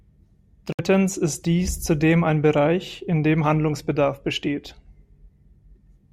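Speech clip with one gap: from 0.72 to 0.81 s the audio cuts to silence, then resumes further along as though it had kept playing. This is likely a Bluetooth dropout, where late packets to the headphones were discarded rather than played.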